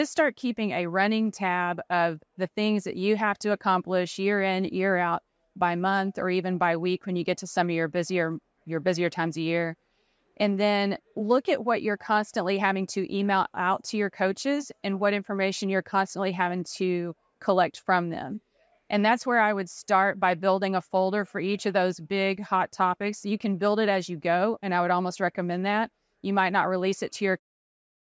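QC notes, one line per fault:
Nothing stood out on listening to this speech recording, and the gentle fade-out at the end sounds like an ordinary edit.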